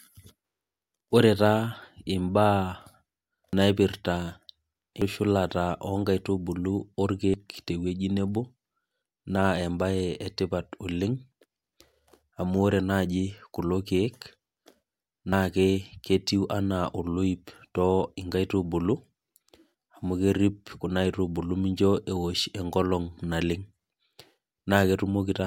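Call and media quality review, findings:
Abrupt skips in the speech, no gap of silence: 3.53 s and 5.02 s (around a third of a second missing each), 7.34 s and 15.33 s (about a tenth of a second each). Likely dropped buffer (overrun) in the capture path: samples were overwritten before the application read them, so whole buffers vanished and the surrounding audio was spliced end to end.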